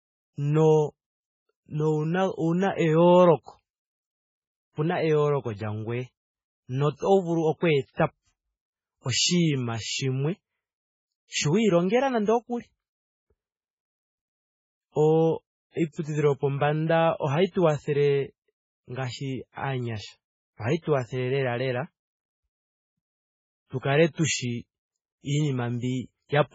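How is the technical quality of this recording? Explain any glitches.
The recording has heavy, constant codec damage and four short pre-echo smears.

Throughout the speech, the sound is dull and watery, with nothing above 7.6 kHz and a swirling, chirpy texture on sibilants. The likely cause is MP3 compression at a very low bitrate, around 16 kbps. Starved of bits, the encoder cuts the treble at a fixed point and zeroes weak frequency lines, which flicker on and off from frame to frame. A simple low-pass filter would be dull but steady, without this swirl.

Pre-echo occurs at 6.98 to 7.02 s, just before "vulu oku etapo", and again at 16.01 to 16.05 s, 19.52 to 19.57 s, and 23.79 to 23.83 s, just before "kale tushi". Each is a short hiss lasting 34 to 46 ms that leads into a sharp onset, which then sounds softened. When an attack lands late in a transform block, the codec spreads noise sized for the loud part across the whole block, including the silence before the attack. 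Unlike a click or an independent noise burst, the hiss sits only immediately before an attack and fades into it.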